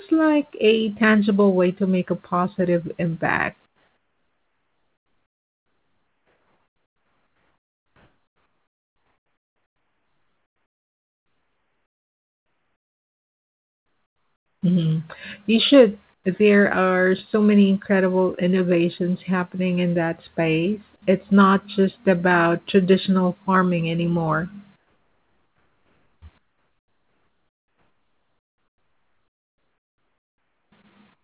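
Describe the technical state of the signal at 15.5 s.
At 15.5 s the speech comes through intact, carried over the call path with its narrowband G.711 sound and nothing above 4 kHz.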